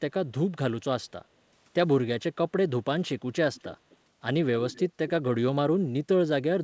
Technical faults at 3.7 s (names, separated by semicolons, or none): echo leak